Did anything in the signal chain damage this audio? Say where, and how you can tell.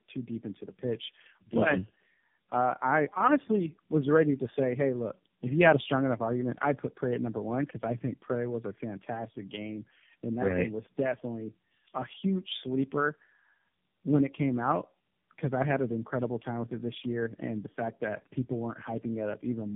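Yes. The damage is in the codec stage and lasts the whole clip. This is tandem speech coding. The speech sounds rough, muffled and warbly, with nothing above 3.7 kHz. That points to three low-rate AMR-NB passes in a row, each re-coding the previous pass's errors.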